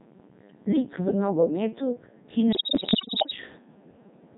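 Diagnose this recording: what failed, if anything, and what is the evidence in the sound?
Wi-Fi interference, analogue wiring stage: faint ticking every 102.4 ms throughout, from a nearby radio's beacons rectified in the circuit. Its clockwork regularity separates it from random crackle.

Codec 2 vocoder, codec stage: robotic, buzzy speech throughout, heavily damaged, even at its top 3.2 kbit/s mode. The waveform is resynthesised from sine waves, unlike the smearing of transform codecs.

Bit errors on digital voice radio, network stage: from 2.52 to 3.36 s the speech jumps in pitch and level and breaks into warbling gibberish. Heavy flipped bits corrupt whole vocoder frames, unlike dropouts that only silence them.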